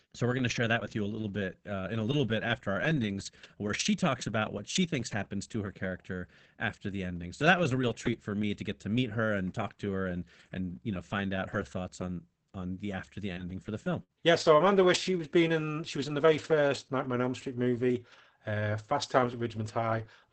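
Just after "on the after the", at 13.33 s, comes a short stall from a late packet lasting to 13.40 s: the jitter buffer ran dry, so the last sound is stretched by about 35 ms with a faint buzz or dip, then speech resumes exactly where it paused, before "for the". Unlike a loss, nothing is skipped; everything after simply arrives 35 ms later.

Overlapping it, from 13.37 to 13.43 s, is a lost packet rebuilt from error correction. Opus played a low-bitrate copy carried in the next packet, so the 60 ms is rough and noisy but has no gap or held tone. The same roughness returns from 14.64 to 14.70 s.

Between them, at 14.03 to 14.12 s, a burst of packet loss makes the receiver extend the preceding sound for about 53 ms, fading it down. It then jumps ahead, dropping 60 ms. Unlike the stall, audio is actually lost.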